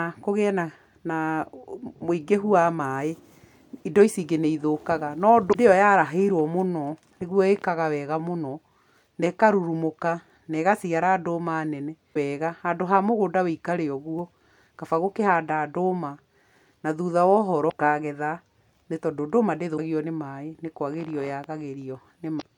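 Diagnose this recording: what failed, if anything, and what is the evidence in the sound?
The compressed speech stream carries damaged data at five points, so the decoder misreads frames and must hunt for the next valid header to regain sync. Each is heard as a brief glitch lasting about 50 ms, at 5.50, 12.11, 17.67, 19.74 and 22.38 s.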